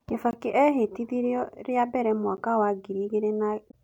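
A 20 ms hole interrupts the speech at 0.31 to 0.33 s, just before "ehĩtithirio rĩa mbere", and a briefer 10 ms tick follows at 2.37 s, right after "ehĩtithirio rĩa mbere". Both are blocks of digital silence: the audio cut out and back with no fade. From 3.67 to 3.74 s damaged data in the compressed stream disrupts the sound, where the decoder lost frame sync and hunted for the next header.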